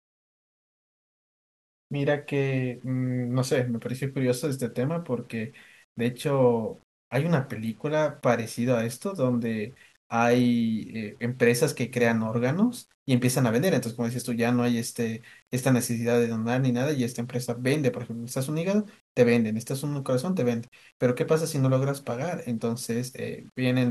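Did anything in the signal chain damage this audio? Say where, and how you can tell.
Yes. Low bit depth without dither runs through the whole speech clip, and the likely stage is a sample-format conversion that rounded the signal to roughly 9 bits. The grain tracks the speech itself: quiet syllables and decays turn gritty, and the softest tails sputter between adjacent steps or drop to silence rather than fading smoothly. With no dither, the rounding error stays correlated with the signal, sitting only about 40 dB below it.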